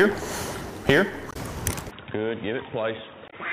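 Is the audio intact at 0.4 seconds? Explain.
Yes, the audio is intact at 0.4 s, with no dropout, click, distortion or other fault at that moment.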